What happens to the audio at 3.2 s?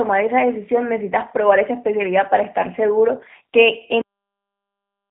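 At 3.2 s you're hearing the same G.729 codec damage that runs through the whole clip. The speech is rebuilt from a vocal tract filter, a pitch estimate and a handful of pulses per frame, so it comes out intelligible but a bit rough and synthetic, the kind of texture that fits a low-rate 8 kbit/s VoIP link. The band sits at roughly 150 Hz to 3.6 kHz, with nothing above 3.7 kHz.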